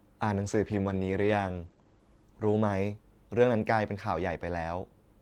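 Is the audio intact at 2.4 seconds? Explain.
No. A call bitrate drop runs from 0.42 s to 4.07 s. The encoder fell from 32 to 12 kbps, holding its lowest rate for 1.33 s, so it coded the speech coarsely and narrowed the bandwidth from 20 kHz to 8 kHz, leaving a rough, muffled sound.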